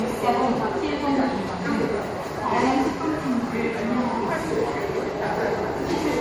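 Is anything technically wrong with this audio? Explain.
Yes. Generation loss runs throughout the clip: the sound is swirly, smeared and hollow, with blurred attacks. This likely comes from about three rounds of MP3 decoding and re-encoding, consistent with 64 kbit/s, each pass re-quantising on a shifted frame grid, compounding noise and spectral holes, with nothing above 21.1 kHz.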